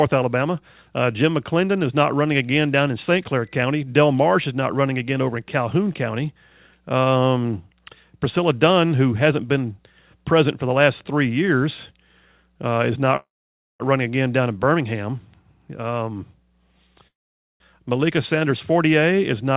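At 13.16 s the sound stops for about two thirds of a second, until 13.83 s. A brief fading continuation leads into near silence. It happens again from 17.07 to 17.63 s. These are call audio freezes, likely caused by delayed packets draining the jitter buffer. Nothing is lost. The speech resumes where it stopped, about 0.64 s and then 0.53 s later than before.

From 19.11 to 19.51 s there is a jitter buffer speed-up. The receiver trims tiny pitch-period slices, roughly 40 ms in total, to cut the built-up delay. The speech runs about 7% faster at unchanged pitch and sounds slightly hurried. Throughout, the G.711 call path passes nothing above 4 kHz.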